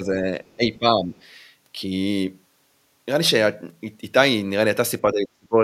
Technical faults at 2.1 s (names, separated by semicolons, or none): none